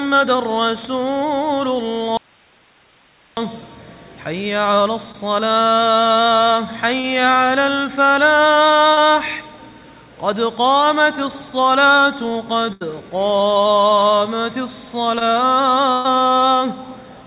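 From 2.17 to 3.37 s the audio drops out to a faint residue. For about 1.2 s the sound is gone. Only hiss remains, roughly 35 dB below the signal. The cut is abrupt at both ends, not a fade. The likely cause is that the wanted signal was lost while the path after the break stayed live, so its own noise floor carried on.

Short concealed packet loss follows at 5.12, 7.00 and 8.93 s, and again at 15.19 s. Each time, 20 to 40 ms of audio never arrived. The receiver patched the hole by extending the last sound for 18 to 36 ms, then blended back into the real signal. Each one is a quick smear or wobble. A very short sound at that spot may simply vanish.

A burst of packet loss hits at 12.73 to 12.83 s. About 80 ms in a row went missing, and all of it was filled. The last sound is held and turned down across the gap, so it sounds like a brief buzz or a dying hiss. The audio then resumes further along. 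A second burst runs from 15.93 to 16.06 s. This one loses about 120 ms. Concealment covers it with no silent stretch, but the held, fading sound is longer. The band stops at 4 kHz, which fits a 64 kbps G.711 A-law call path.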